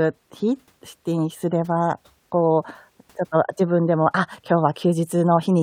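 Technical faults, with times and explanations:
Nothing stood out as a technical fault on listening to this speech recording.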